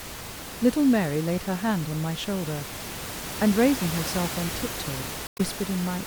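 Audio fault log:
5.25–5.41 s, damaged data in a compressed stream: a brief disturbance cuts into the speech for about 160 ms, with the room noise sitting about 10 dB below the speech. Corrupted bytes in this stretch of the encoded file give the decoder frames it cannot read properly. It decodes garbage or throws the frames away and must hunt for the next valid frame header before sound resumes, which produces the glitch.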